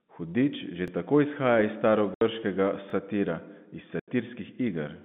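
At 0.88 to 0.90 s, right before "tako izhaja", there's a little stutter from overlapping chunks. Each 2.0 s block starts about 23 ms before the previous one finished, so that sliver plays twice at the join. The same hiccup comes back at 2.90 to 2.92 s, two seconds later.

In between and after, there's packet loss filled with silence. The audio drops out hard at 2.14 to 2.21 s (70 ms) and again at 4.00 to 4.08 s (80 ms). Those lengths fit 10 ms packets going missing. The surrounding sound stays in the narrow 150 Hz to 3.6 kHz band of the G.711 telephone coding.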